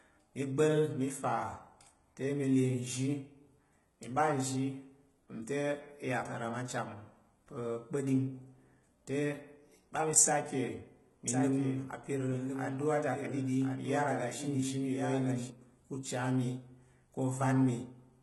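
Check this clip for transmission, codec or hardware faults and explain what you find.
Two faults are audible in this speech recording: a codec problem across the whole clip, and a duplicated stretch near the end.

For the entire clip the upper frequencies sound bright but synthetic, with gritty, metallic s sounds and nothing above 11.8 kHz. The likely cause is heavy HE-AAC compression, at a rate that fits roughly 16 kbps. The codec stores only the lower spectrum and rebuilds the treble by copying those bands upward, so the harmonics don't align.

From 11.28 s to 15.50 s, a second full-band copy of the speech runs about a second behind, about 5 dB quieter. It has no reverberant tail and cuts in and out abruptly. This is likely a doubled audio track, where the same signal gets mixed in twice and out of step, from a slower capture path or an edit.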